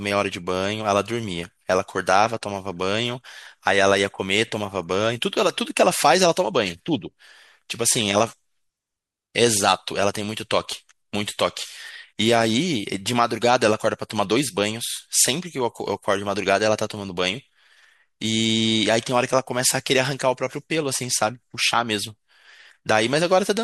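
No technical faults can be heard anywhere in the speech recording.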